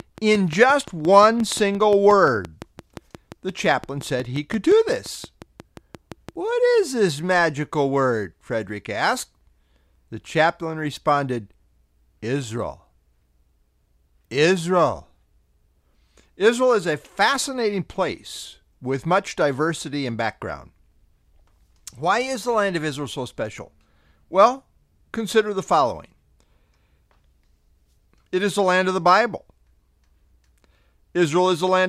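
Something in the signal chain, likely interference from nearby equipment or a faulty connection or power supply, is injecting a regular pulse into this speech recording, producing a train of clicks from the very start, 0.00 s, to 6.30 s. The clicks arrive evenly at about 5.7 per second, around forty in all, each much the same shape and peaking roughly 5 dB above the speech, so a steady ticking sits over the voice and continues through the pauses.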